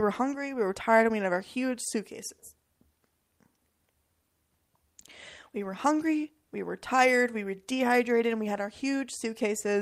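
Nothing in this speech recording stood out as a technical problem on listening.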